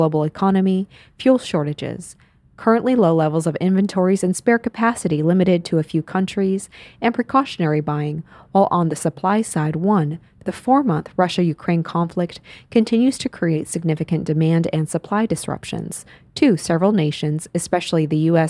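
No faults can be heard anywhere in the speech, with no dropouts, clicks, distortion or timing errors.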